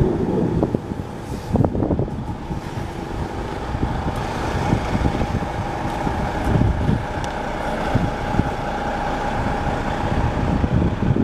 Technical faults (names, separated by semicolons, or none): none